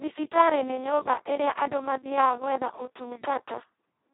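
Throughout, the speech sounds hoarse, buzzy and close to robotic, with nothing above 3.9 kHz. This is heavy Speex codec damage: the sound points to a setting near 2 kbps, leaving the CELP coder too few bits for the excitation, so it behaves almost like a vocoder.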